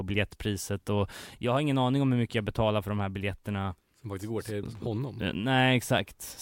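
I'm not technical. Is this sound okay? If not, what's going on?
No, there's a short burst of loose connector crackle from about 4.65 to 4.79 s in this speech. A worn or dirty plug contact is briefly losing and regaining its connection, so the sound gets chopped up into a scratchy crackle for that moment.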